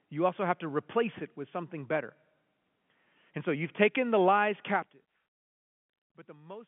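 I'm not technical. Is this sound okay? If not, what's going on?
Yes, no faults found; it's speech over an ordinary phone line, and that narrow phone sound is how it's meant to be.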